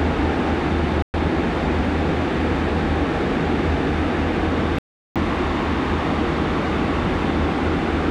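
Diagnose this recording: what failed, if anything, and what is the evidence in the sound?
The output goes dead twice, from 1.02 to 1.15 s and again from 4.79 to 5.17 s. Each time the sound comes back further along, as if it kept playing through the hole. That points to the wireless playback link, most likely a Bluetooth dropout. Packets missed their deadline at the headphones and were thrown away, so nothing played until good data arrived. The losses, roughly 116 ms and 372 ms, fit a handful and then a longer run of dropped packets.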